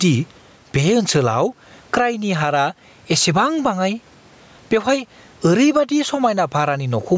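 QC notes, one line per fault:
Throughout, gain pumping. Level pumps under loud speech by around 15 dB, squashing loud and soft parts closer together. Likely excessive gain into a fast limiter.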